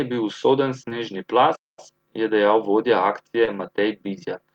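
A speech clip with two kinds of fault. Short concealed packet loss occurs twice: at 0.89 to 0.93 s, just after "je bil usoden", and at 3.45 to 3.49 s, just after "je dejal vodja". Each time about 20 ms of audio failed to arrive and the decoder extended the preceding sound before blending back, so it is heard as a quick smear or wobble rather than a gap. A playback stall runs from 1.55 to 1.79 s, right before "je dejal vodja". The output falls fully silent for about 220 ms and then resumes, most likely because the player ran short of data or its thread was blocked.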